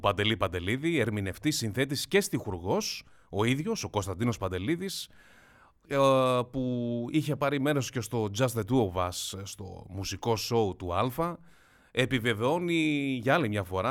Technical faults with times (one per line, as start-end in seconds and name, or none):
none